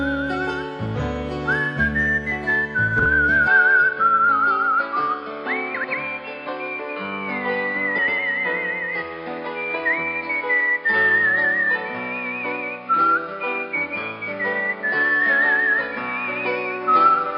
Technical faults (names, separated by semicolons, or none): frames out of order; input switched to a poorer device